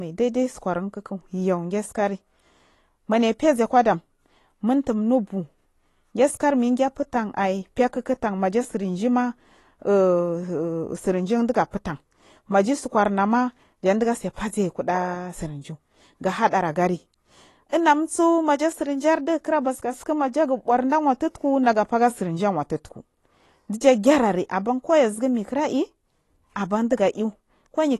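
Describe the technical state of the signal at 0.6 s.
At 0.6 s the speech carries AAC compression damage that runs through the whole clip: nothing above 12 kHz, with a smeared, warbling texture on sibilants, likely from an AAC-LC coder at a bitrate near 32 kbps. Unlike a simple low-pass filter, this also leaves the fizzy artefacts of coarse quantisation.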